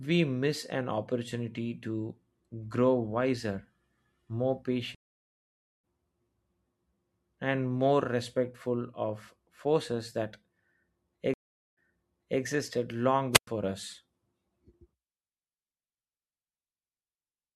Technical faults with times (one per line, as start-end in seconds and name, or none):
4.95-5.83 stream reconnect
11.34-12.41 stream reconnect
13.32-13.47 wireless microphone squelch dropout